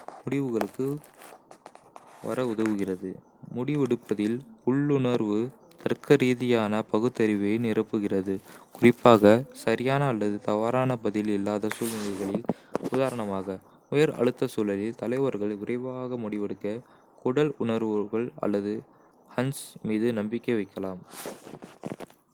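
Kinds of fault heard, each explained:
No technical faults can be heard in this recording.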